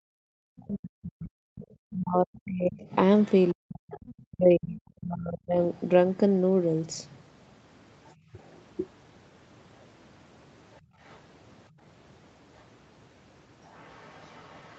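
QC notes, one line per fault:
0.00–0.12 s and 10.81–10.99 s, background gated by the echo canceller: while the loudspeaker played, the canceller clamped the microphone, so the room sound drops out briefly, by about 40 dB for roughly 0.1 s at the start, and by about 22 dB for roughly 0.2 s later.
0.40–5.59 s, speech suppressed in double talk: the talker is pushed down hard and unevenly for about four seconds in total, with the deepest dips around 40 dB. This is likely the echo canceller mistaking the talker for loudspeaker echo while both sides spoke at once.
1.58–4.14 s, 8.05–8.56 s, 10.74–11.20 s, 12.58–12.63 s, 13.65–14.79 s, other side's voice leaking through: a second voice sits faintly under the talker, roughly 25 to 40 dB down and loudest in the first stretch. It is likely the far end's loudspeaker playback that the echo canceller did not fully remove.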